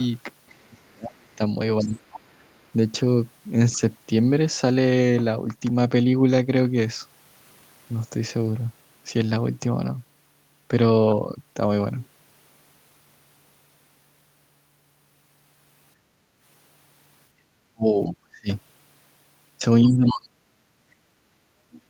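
From 0.48 to 2.28 s a second, faint voice runs under the talker, roughly 25 dB down. This is likely the other side's voice leaking through. The far end's loudspeaker sound reached the microphone and the echo canceller left some of it behind.

Overlapping that, from 0.67 to 2.45 s, the talker's speech drops away for about a second in total, by roughly 35 dB at worst. This is likely speech suppressed in double talk. With both sides active, the canceller turned everything down. A brief dip of about 10 dB follows at 3.72 to 3.81 s, likely the same cause.

From 16.0 to 16.4 s the room sound sinks by about 7 dB, then recovers. The background was gated by the echo canceller while the loudspeaker played.

At 17.71 to 18.48 s, and again from 19.84 s to the end, speech collapses by roughly 40 dB. The first drop lasts about half a second. Both are likely double-talk suppression.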